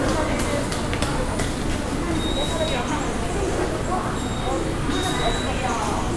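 No technical faults can be heard anywhere in this recording of everyday sounds, so there are none to describe in time order.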